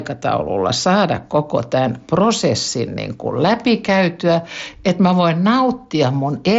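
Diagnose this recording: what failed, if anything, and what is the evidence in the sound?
Nothing failed: the speech carries the normal signature of a Bluetooth mSBC headset codec link, with content stopping at about 7.7 kHz and only the light grain that codec leaves on louder passages, consistent with that path working as designed.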